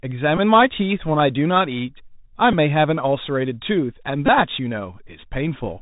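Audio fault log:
throughout Bluetooth CVSD headset codec. The speech is cut off above 4 kHz. A one-bit coder with an adapting step cannot keep up with loud high content, so sibilants turn scratchy and a granular hiss sits under everything. Damage is plainly audible.
0.37 s, 2.52 s, 4.26 s Bluetooth headset packet repeated. Lost audio was filled by replaying the previous packet, for 11.2 ms, 7.5 ms and 18.8 ms, which fits runs of two to five packets. Each repeat gives a brief buzz near 267 Hz.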